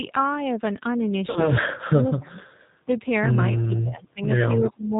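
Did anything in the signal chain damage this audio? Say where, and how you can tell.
Yes. The codec stage damages the whole clip. The speech has nothing above 4 kHz and sounds plainly rough and synthetic. That pattern fits G.729 at around 8 kbit/s. G.729 rebuilds each 10 ms frame from a vocal-tract filter, a pitch predictor and a handful of pulses rather than the actual waveform, so detail is lost all the way through.

At the network stage there is VoIP packet loss concealed by the speech codec, from about 1.30 to 1.48 s. Roughly 60 ms of audio is missing, consistent with a couple of lost packets. At that point the sound is stretched and fades as the decoder repeats its last pitch and filter with falling gain. The voice stays weak or distorted until about 1.48 s because each rebuilt frame depends on the previous one.

At the call-processing stage the speech is suppressed in double talk, twice. 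From 1.59 to 2.39 s the level dips for about 0.7 s in total, at worst by about 30 dB. From 4.70 to 4.96 s a shallower dip of about 15 dB lasts around 0.3 s. The likely cause is an echo canceller that could not separate this talker from far-end echo while both sides spoke, so it attenuated the near-end signal.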